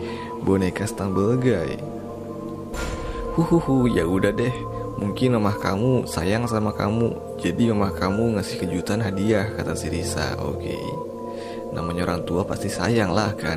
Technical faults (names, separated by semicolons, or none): none